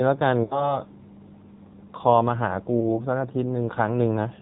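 Throughout, the speech is squeezed through the AMR narrowband mobile codec at a low rate, which fits about 7.4 kbps, leaving nothing above 4 kHz and a plainly buzzy, synthetic tone. Between 0.44 and 0.79 s, lost AMR speech frames make the decoder stretch its last good settings with falling gain across about 60 ms, so the sound smears, fades, then returns weak. A single 20 ms frame loss at 2.80 to 3.03 s causes a brief dip or warble.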